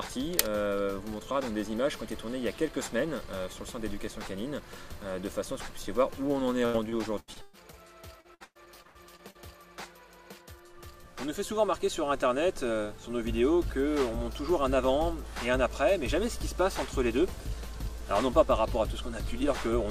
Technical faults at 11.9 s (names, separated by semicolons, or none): none